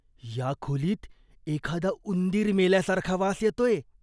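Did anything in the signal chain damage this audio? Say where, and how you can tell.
No, nothing in the signal chain damaged this speech recording. Every stage from capture through to playback leaves the sound intact, with nothing audible to trace back to any part of the path.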